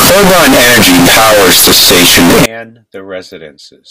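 From the start to 2.46 s the speech turns blaringly loud and harsh, a buzzing, nearly square waveform pinned at an almost fixed, high level, with the background noise pushed up to the same level as the voice, though pitch stays traceable. This is float read as integer: samples likely written as 32-bit float were read as 32-bit integers, so sign and exponent bits dictate each value regardless of how quiet the original was.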